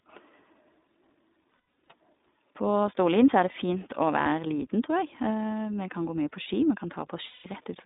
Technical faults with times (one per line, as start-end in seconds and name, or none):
0.00-7.85 iLBC codec
1.51-1.92 lost iLBC frames
4.22-4.28 lost iLBC frames
7.28-7.46 lost iLBC frames